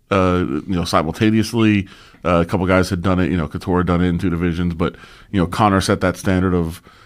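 Corrupt frame decoded at 1.60 s: damaged bits in one compressed frame were played anyway, misplacing energy across frequencies and producing a brief chirp-like blip peaking around -15 dBFS.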